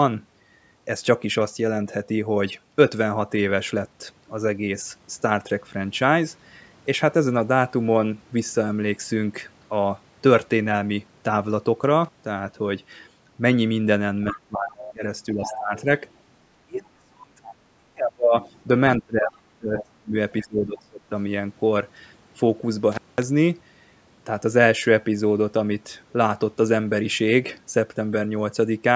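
At 12.04 to 12.18 s, an intermittent contact opens the line for about 97 ms. The speech cuts out with crackle at both edges and faint hiss in the gap. A codec dropout would leave a clean, silent gap instead. A second contact break follows at 22.92 to 23.23 s, lasting about 207 ms.

From 14.31 to 15.89 s, and again from 16.66 to 21.12 s, the speech is suppressed in double talk. This is likely an echo canceller turning down the talker while the far side spoke. The level is turned down, by up to about 20 dB and then about 35 dB, with no crackle at the edges.

Across 14.37 to 16.11 s, and in short scraps at 17.44, 18.41, 19.79 and 20.41 s, the other side's voice leaks through. It sits about 15 to 25 dB below the talker. This is likely loudspeaker echo the canceller missed. A distinct second voice is heard, where reverberation would only smear the talker's own sound.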